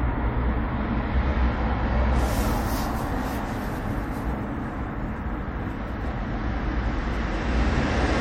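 From start to finish the sound carries plainly audible MP3 compression damage, likely from encoding at a low bitrate, which fits something around 64 kbps. The encoder ran short of bits, so it removed the treble above a fixed frequency and dropped quieter frequency lines, which flicker in and out between frames. The result is a watery, swirling texture with smeared attacks. A spectrogram would show a flat ceiling and speckled, blinking gaps below it.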